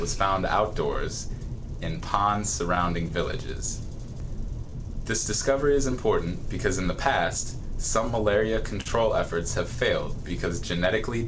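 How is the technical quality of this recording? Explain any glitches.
The recording has a clear network-timing problem: the audio arrives at an uneven pace and has several small patches and one brief hold. It came through a call path whose wideband codec leaves nothing above 8 kHz, consistent with G.722 at 64 kbps. On a spectrogram, that shows as a flat ceiling across the whole clip.

Clock drift between sender and receiver runs through the entire recording. The sender's clock appears to run roughly 3 percent slow relative to the receiver's, so the receiver's jitter buffer keeps draining. The result is a faintly unsteady pace, as if the audio occasionally drags. No single event stands out on a waveform. Instead, the drift shows up as the cumulative pattern of the corrections described below.

Repeated timing corrections occur from 1.27 s to 11.25 s. Because the sender is slow, the receiver keeps stretching short pieces of audio to stay in step. 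Overall the playback runs at about 98 percent speed and gains about a fifth of a second across the stretch. Each edit is tiny and unevenly spaced, heard at most as a slight hitch. On a spectrogram, these appear as occasional slightly elongated segments rather than sharp breaks.

Scattered short gaps occur between 0.71 s and 1.69 s and again between 2.75 s and 3.69 s. Each burst contains a few lost or late packets, each hole around 10 ms at most, which the receiver covered by continuing the previous sound. Nothing is actually missing. The concealed portions make up only a few percent of each span and are audible as brief ticks or smears. A waveform shows small, repeated-looking cycles at those points, and a spectrogram shows thin vertical seams.

A short stall from a late packet happens at 8.81 to 8.88 s. The packet missed its slot, the jitter buffer ran dry, and the receiver held the last sound for 45 ms before resuming where it left off, adding 45 ms of delay. 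The effect is a momentarily sustained sound with a slight buzz or dip. On a spectrogram, this looks like a short, horizontally smeared block of frozen harmonics.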